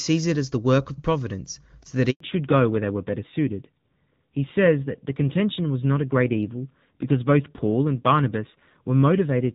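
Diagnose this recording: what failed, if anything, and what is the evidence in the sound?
Network stage: a handover gap at 2.10 to 2.20 s. Speech fades quickly to 100 ms of clean silence while the call switches networks, with no clicks or stutter as in packet loss.

Codec stage: fallback to narrowband from 2.20 s to the end. Clear HD Voice, which fits AMR-WB near 23.85 kbit/s, loses everything above 4 kHz and turns rougher, which fits AMR-NB at 7.4 kbit/s. The added roughness marks a codec switch, not a simple low-pass filter.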